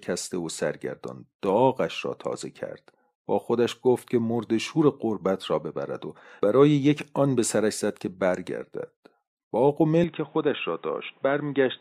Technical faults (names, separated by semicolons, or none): input switched to a poorer device